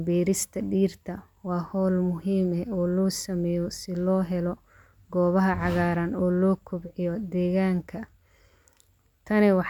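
No technical faults can be heard anywhere in the recording; the speech signal stays steady and intact throughout.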